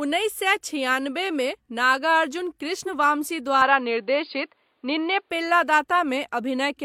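At 2.84 to 2.89 s, right after "छिआनबेमे नागार्जुन", damaged data in the compressed stream produces a brief glitch. Corrupted frames there are misread by the decoder, which loses sync and resynchronises at the next valid frame header, leaving a short audible glitch.

From 3.62 to 5.30 s the speech turns dull and band-limited, with nothing above 4.9 kHz. The level shifts by roughly 5 dB and a faint new noise floor appears around 50 dB down. There is no gap at the transition. The likely cause is the input switching to a poorer device with a narrower passband.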